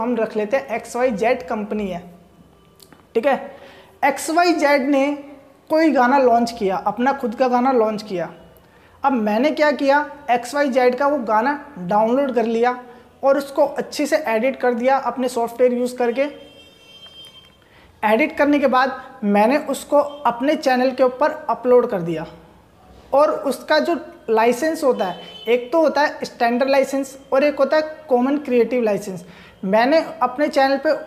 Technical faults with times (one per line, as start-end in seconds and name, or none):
none